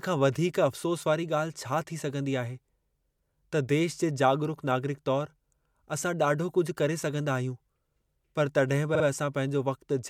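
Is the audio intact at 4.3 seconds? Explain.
Yes, at 4.3 seconds the speech runs through with no audible dropout, click, distortion or other fault.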